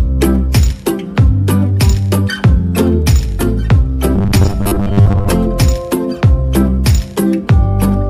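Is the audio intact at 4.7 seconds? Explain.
No. At 4.7 seconds the clip is inside a stretch of robotic sound from repeated short buffers, running from about 4.16 to 5.31 s. A fixed 100 Hz buzz sits on the audio, and the sound turns rigid and metallic, tracking the original only loosely. The likely cause is playback starved of new data, so the software keeps replaying the last segment, which fits a 10 ms repeat. Roughly half the material in this span is repeated rather than new.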